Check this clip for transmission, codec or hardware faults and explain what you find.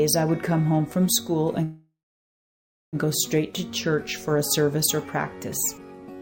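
There's one fault, a call audio freeze from 1.63 to 2.96 s. The sound hangs as a fading buzz or hiss that drops to silence for about 0.98 s, then picks up exactly where it stopped, with nothing lost. Likely delayed packets draining the jitter buffer.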